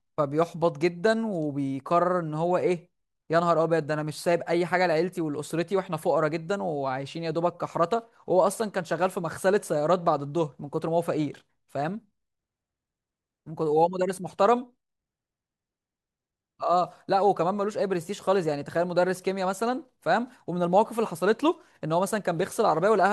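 From 8.47 to 9.42 s there is a block size mismatch (truncated): one stage delivers blocks slightly longer than the next stage accepts, and each block's tail is dropped. The speech picks up a 100 Hz buzz at the block rate, while its speed and pitch stay essentially unchanged.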